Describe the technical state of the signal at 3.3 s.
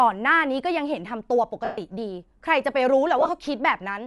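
Right at 3.3 s the speech ends a stretch of broken-up sound running from 3.19 s to 3.30 s. About 60 ms of signal is missing, scattered across roughly 105 ms in short gaps, none much longer than a couple of frames. These are lost LE Audio frames. For each missing frame the LC3 decoder replayed the previous spectrum with randomised signs, so instead of clean dropouts the gaps are filled with a brief grainy, noisy smear.

Underneath, the speech has a breathy, gritty edge in the upper range throughout. That is Bluetooth LC3 compression. The codec discards part of the high-frequency detail and fills it with shaped noise, which sounds like a moderate Bluetooth LE Audio bitrate, likely around 48 kbps with short 7.5 ms frames. The concealment smear at 3.3 s is built from the same already-coarse spectrum.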